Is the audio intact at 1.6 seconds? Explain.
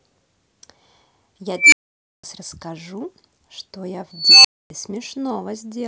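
No. At 1.6 seconds the speech is caught in an unstable filter fault running from 1.57 to 2.24 s. A recursive filter with bad coefficients feeds its output back on itself and grows without limit. A tone of roughly 2 kHz swells over about 152 ms into a loud squeal and clips, then the values overflow and the sound cuts out for 512 ms until the filter resets. On a waveform this looks like an envelope ballooning until it clips, flat-topped, then a flat silent gap. A spectrogram shows a bright horizontal line near 2 kHz followed by an empty band.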